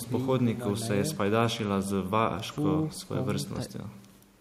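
No faults are audible anywhere in the recording.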